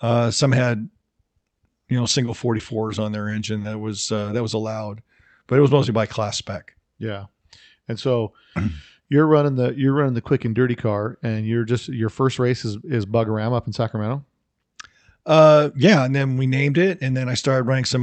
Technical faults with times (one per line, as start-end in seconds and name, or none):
1.37-4.27 repeated packet loss (robotic sound)